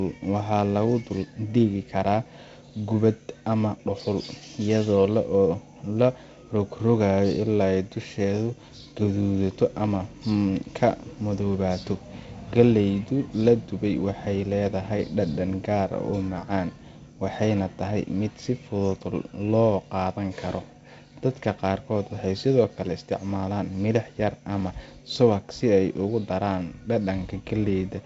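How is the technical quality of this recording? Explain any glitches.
The speech has no glitches, and it arrives over a G.722 wideband telephone path at 48 kbit/s that keeps content up to about 7.8 kHz, with only the light coding hiss and slightly noisier lower band that this rate brings.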